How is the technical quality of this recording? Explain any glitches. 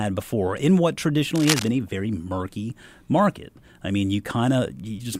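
The recording has one audible glitch, a burst of scratching noise in the first two seconds.

Cable scratch noise runs from 1.35 to 1.69 s, between "before in what" and "a very murky market". A worn cable or connector being moved likely caused it, with the contact resistance jumping rapidly. It sounds like dense, uneven rustling laid over the speech, only about 5 dB below it.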